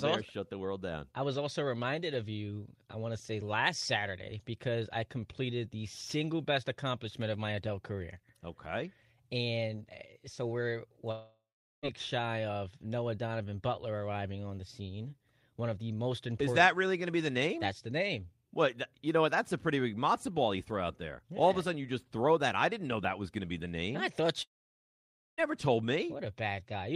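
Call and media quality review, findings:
Speech cuts out at 11.11 s, after "so we're". Likely long network dropout. Tail stretched into fading buzz, then 0.4 s silence. Resumes 11.86 s with about 0.72 s of speech gone.

Second likely long network dropout at 24.43 s, after "the name I thought". Brief fade, then 0.91 s near-silence. Audio returns 25.41 s. About 0.96 s lost, never replayed. Receiver concealment covers the gap only briefly.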